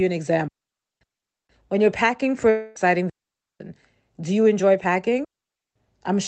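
At 0.48 s the speech drops into a clean hole of near silence lasting about 0.53 s, ending at 1.01 s, with no crackle or noise burst on either side. This is a digital wireless dropout. The radio link lost too much data, so the receiver muted with a very fast fade rather than passing on corrupted audio.

From 2.49 s to 2.77 s the last sound is stretched into a fading buzz that fills the whole 0.26 s gap and never reaches true silence. The speech then resumes further along, with that stretch missing. The likely cause is a long network dropout: no packets arrived, so the receiver extended what it had instead of playing the real audio.

The same clean wireless mute returns twice more, from 3.10 to 3.60 s and from 5.24 to 5.76 s, each about half a second long. The surrounding audio carries the usual coding texture and roughly 8 kHz upper limit of the Opus call path.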